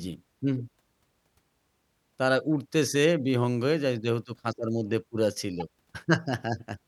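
At 5.60 to 5.62 s a corrupt frame decoded: flipped bits across a couple of frames misplaced energy, giving a brief chirp, squeak, blip or burst of noise, a spectrogram smear near -25 dBFS.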